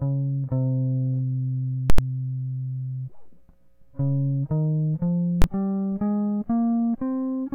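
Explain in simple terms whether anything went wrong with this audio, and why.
Something did go wrong with this music, twice, and it's a fault called invalid numbers at full scale. A calculation spat out impossible values, and the output got pinned at one extreme value, far beyond the music's normal peaks. From 1.90 to 1.98 s (about 85 ms, which fits a 4096-sample block) you hear a loud pop, a gap with no sound, then another pop. At 5.42 s the stuck stretch lasts only 21 ms, so it comes across as one sharp bang.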